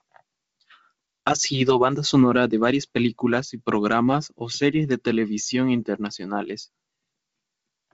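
No technical faults are audible.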